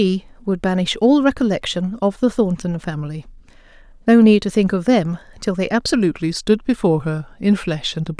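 From 5.94 s to the end, the speech slows and drops in pitch together, a wrong sample rate fault. Playback runs at about 0.92 times normal speed, pitch falls about 1.5 semitones, which fits 24 kHz audio played at 22 kHz without conversion.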